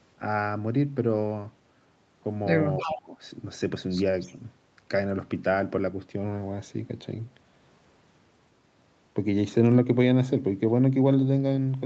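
From 2.77 to 2.98 s an echo leak appears. A copy of the speech returns 308 ms late, about 10 dB below the speech itself. The likely cause is an echo canceller at the far end letting its loudspeaker sound back into the call.

From 2.80 to 3.16 s the speech is suppressed in double talk. The level drops by up to about 20 dB, over around 0.4 s. The speech sinks away while the echo overlaps it. The canceller likely turned down both signals at once.

From 4.20 to 4.36 s the echo leak returns. It has the same 308 ms delay, but it is much weaker, about 25 dB below the speech. It is only a brief trace behind the speech.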